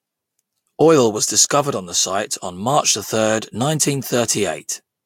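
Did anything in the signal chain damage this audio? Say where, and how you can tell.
No, nothing in the chain audibly damaged this recording; the signal is continuous throughout, with no dropouts or discontinuities at any point.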